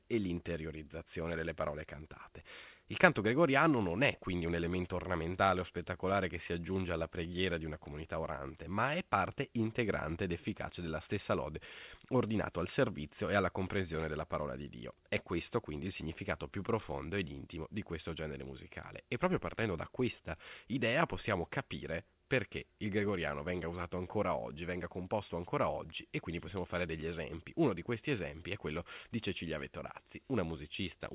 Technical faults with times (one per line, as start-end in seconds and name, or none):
none